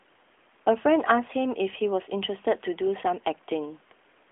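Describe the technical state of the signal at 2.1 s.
At 2.1 s the signal is intact, with no fault present; the sound comes through the AMR narrowband mobile codec path as expected, band-limited so that nothing above about 3.6 kHz reaches the ear.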